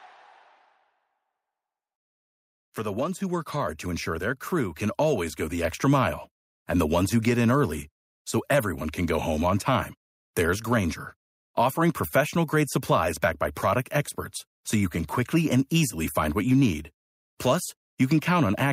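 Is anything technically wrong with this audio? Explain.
Yes. The microphone volume is stepped up twice. At 3.69 s, after "the ones who work", the level jumps by about 4 dB. At 5.64 s, after "can always go the", it rises by about 2 dB more. The capture software judged the input too quiet. It raised the device's input volume in a single step each time. The speech and the background noise get louder together. Each step is abrupt, with no fade.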